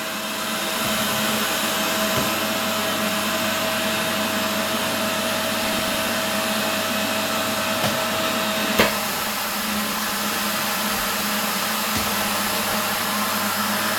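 Short blips of noise burst over the sound at 5.60–6.13 s, 9.18–10.18 s and 12.04–13.04 s: DAB burbling, where bit errors slip past error correction and put short blips of noise into single sub-bands.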